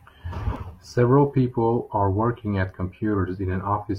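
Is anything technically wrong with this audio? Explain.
Yes. An overlap between stream segments occurs at 0.56 to 0.60 s. Two segments of the stream were stamped as covering the same stretch of time, and the player discarded the apparent duplicate even though that audio existed only once. About 36 ms of the speech is lost, and the waveform jumps straight from the sound before the gap to the sound after it, producing a tiny skip.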